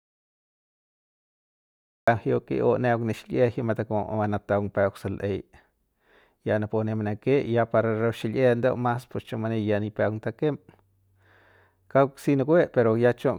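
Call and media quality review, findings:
Audio dropout to silence, 0–2.08 s, under way at start. Flat silent waveform, blank spectrogram, no room tone; speech enters abruptly. Likely input loss before encoder.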